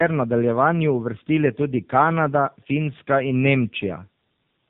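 Throughout, tandem speech coding: two AMR-NB-like passes compound each other, leaving rough, muffled, warbly speech. The spectrogram shows a hard ceiling at 3.7 kHz.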